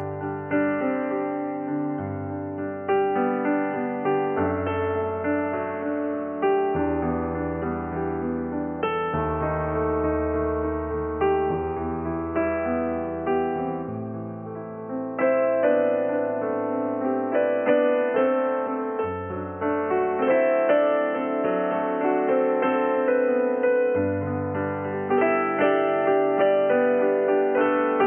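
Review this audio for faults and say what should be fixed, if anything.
Nothing stood out on listening, so there is nothing here that needs fixing.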